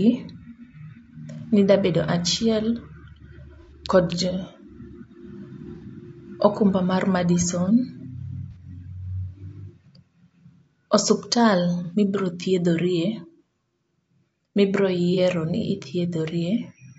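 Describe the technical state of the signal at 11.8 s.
At 11.84 s, running to 11.94 s, there is AAC frame loss with concealment: a gap of about 60 ms of missing data, which points to a couple of dropped frames. The decoder filled it by reusing the last good spectrum, so the passage turns briefly smeared and noisy-phasey just before "mibeo thiedhorie". Because the loss is short, it never decays into silence and fades back in. That stationary smear is what separates it from a plain dropout or a click.

Underneath, the whole passage carries low-delay AAC compression, with damage plainly audible. It is likely from AAC-ELD at a rate fitting about 32 kbps. Its short frames resolve pitch harmonics poorly, so the speech sounds rough and grainy, with noise filling between harmonics and a thinned, synthetic-sounding top band. Unlike the concealment patch, this texture is constant rather than confined to one brief moment.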